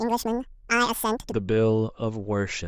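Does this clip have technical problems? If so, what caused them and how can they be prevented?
Yes. From 0.0 to 1.32 s there's a wrong sample rate problem: the speech runs twice as fast and sits a full octave (12 semitones) higher, so it comes out chipmunky and rushed. That's what you get when samples are clocked out at double the rate they were captured at with no conversion, which fits 16 kHz audio being played as 32 kHz. To prevent it, make sure playback reads the file's declared rate or resamples explicitly before output.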